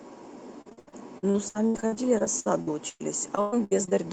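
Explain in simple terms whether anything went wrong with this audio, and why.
From 0.61 s to 3.93 s the speech suffers repeated packet loss, giving a choppy, robotic sound. More than twenty chunks of audio went missing, the longest 113 ms, and each was patched by stretching the preceding sound, so roughly a third of that stretch is filler.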